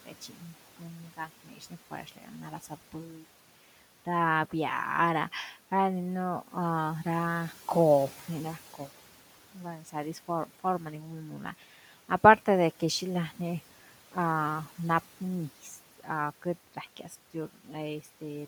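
Across the whole clip the background pumps down between phrases and swells back beneath them. These are noise suppressor artifacts: the processor pulls about 12 dB from whatever bands it judges to be steady room noise, which itself sits about 18 dB under the speech.

At 0.06 to 3.24 s, 8.18 to 8.89 s, 9.54 to 10.61 s, 11.59 to 13.38 s and 15.63 to 17.12 s, quiet sounds and word edges go faint and swallowed, dipping by up to about 12 dB. This is speech cut by the noise suppressor, which mistakes those soft parts for noise. The losses add up to around a second in the first span and a few hundred milliseconds or less in each of the others.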